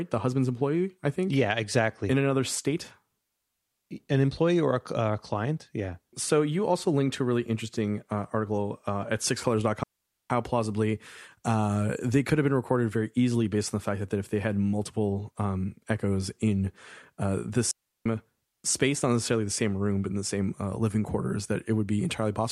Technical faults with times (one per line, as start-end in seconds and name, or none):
9.83-10.30 digital wireless dropout
17.71-18.06 digital wireless dropout